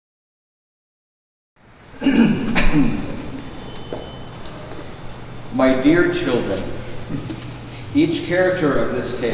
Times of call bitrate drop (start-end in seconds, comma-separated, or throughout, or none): none